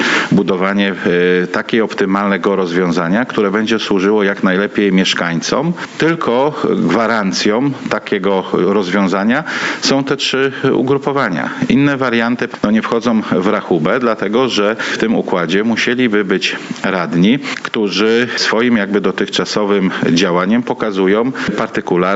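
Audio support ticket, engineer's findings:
Gain pumping, throughout. Level of quieter passages and background swells between loud moments, then ducks by around 10 dB as each loud sound arrives. Likely cause: input gain set far too high, with a fast limiter or compressor clamping every loud onset. Waveform: flattened envelope, loud and soft sections close in height, background rising visibly in gaps. Spectrogram: background noise floor brightening between events and darkening under each one. Content above 8 kHz absent, consistent with the call path's normal bandwidth.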